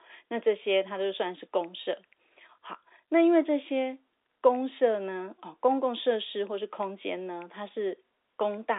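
Nothing in this speech clip is technically wrong. It carries the narrow sound of a working G.711 telephone line, with the band running from about 300 Hz to 3.7 kHz and nothing above 4 kHz.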